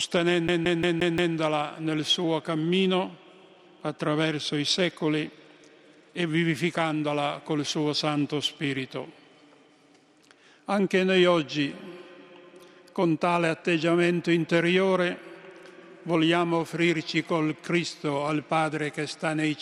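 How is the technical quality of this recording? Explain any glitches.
The recording has one clear glitch near the start, a CD stuck on one turn, from 0.48 to 1.35 s. A scratch or defect on the disc makes the laser jump back one track at the same point on each revolution, so the player keeps re-reading the same stretch instead of moving on. The result is a fast, regular stutter: a 175 ms slice of audio repeats five times, each pass broken by a brief mute at the jump, before playback continues.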